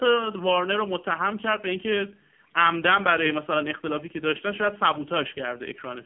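From start to finish the speech sounds thin, buzzy and synthetic, with nothing above 3.4 kHz and little below 150 Hz. This is the AMR narrowband mobile codec, its vocal-tract model starved of bits, which fits a very low rate near 5.9 kbps.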